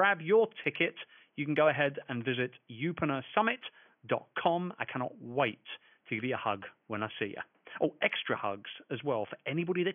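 Nothing in the speech stood out on listening, with only a faint room noise sitting about 46 dB below the voice.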